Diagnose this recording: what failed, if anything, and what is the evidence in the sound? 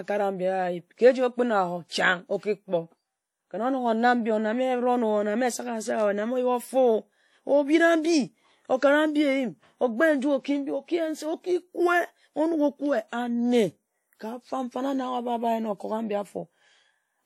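WMA compression, throughout the speech: a plainly audible ringing, washy smear with hiss that breathes with the signal, and nothing above 16.4 kHz. This points to a low-bitrate transform codec stage, likely WMA at around 48 kbps, whose long blocks spread quantisation noise and zero weak components.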